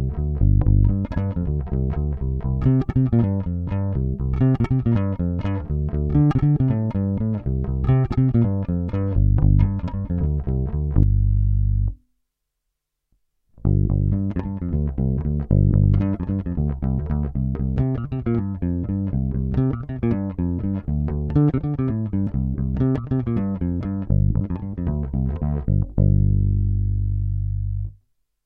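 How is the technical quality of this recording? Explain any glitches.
Three audible dropouts where the audio jumps forward, all compressed frames skipped. At 11.03 s about 0.7 s goes missing, which points to roughly ten frames. At 22.27 s and 24.41 s the skips are shorter, around 0.3 s each. The decoder never plays those chunks, so the sound leaps ahead in steps that fit a frame of about 93 ms.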